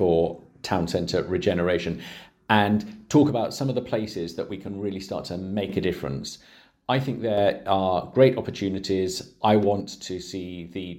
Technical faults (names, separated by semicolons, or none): one channel drops out